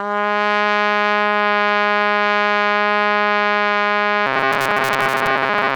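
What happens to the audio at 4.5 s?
At 4.5 s the music has robotic sound from repeated short buffers, running from 4.27 s to the end. A segment of roughly 7.5 ms likely repeats to fill late audio, replacing most of the real signal with a rigid metallic 134 Hz buzz. The waveform shows identical repeating cycles, and the spectrogram shows evenly spaced harmonic lines.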